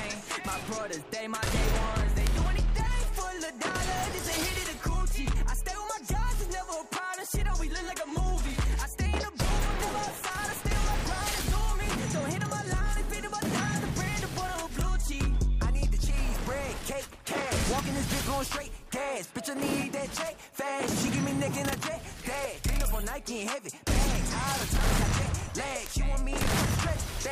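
Bit error spikes occur at 2.27, 4.19, 11.41, 14.81 and 25.86 s. In each, a single flipped bit throws one or a few consecutive samples off by a power of two before the waveform snaps straight back. The result is a lone, sharp, broadband tick with no relation to the surrounding sound. The one at 11.41 s sits about 6 dB lower than the others. Unlike an edit click or a dropout, nothing is lost or shifted around it.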